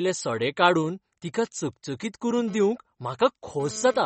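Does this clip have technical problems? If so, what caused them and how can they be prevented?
Yes. Across the whole clip the speech shows plainly audible damage that is likely from MP3 compression: nothing is present above about 8.4 kHz, and the remaining band has a watery, swirling texture with chirpy s sounds and softened consonant attacks. The encoder, starved of bits, which fits a rate of roughly 32 kbps, has cut the treble and zeroed weaker frequency lines that flicker between frames. Encoding at 128 kbps or more, or using a lossless format, would prevent it.

From 2.48 s to 4.00 s, right after "काडून तिका चकचकीत करून", a GSM phone buzz appears. It is a hard, raspy tone at 217 Hz with a dense stack of harmonics, about 19 dB below the speech. It comes and goes rather than holding steady, which points to a phone doing a data transfer. The audio circuitry rectifies the phone's radio bursts, and they enter the signal regardless of what is being recorded. 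Keeping phones away from the recording chain, or switching them to airplane mode, would prevent it.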